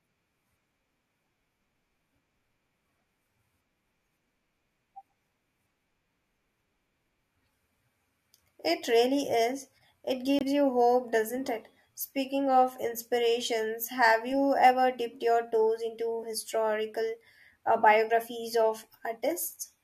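At 10.39 to 10.43 s, a corrupt frame is muted: a rejected compressed frame becomes an abrupt 38 ms gap, a flat waveform and blank spectrogram column, pointing to one dropped frame.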